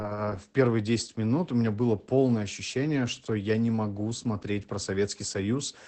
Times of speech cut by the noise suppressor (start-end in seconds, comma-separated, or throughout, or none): none